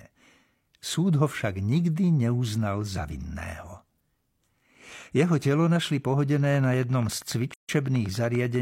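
Interference from nearby equipment or a faulty connection or power supply is the likely cause of a regular train of clicks from 6.45 to 8.56 s, just after "telo našli": about twenty ticks at 10.2 per second, peaking about 5 dB above the speech. Separately encoded pieces joined without trimming leave a gap at the join from 7.54 to 7.69 s: a gap of roughly 149 ms with smeared edges, then the speech resumes where it stopped.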